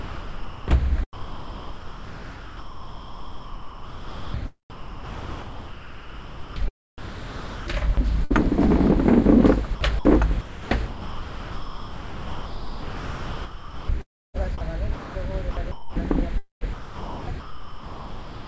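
From 0.0 to 9.4 s and again from 9.75 to 18.46 s, the sound is chopped by the voice detector, which likely kept switching sending on and off. About 6.5 s and 6.2 s of sound became comfort noise, so the audio is choppy.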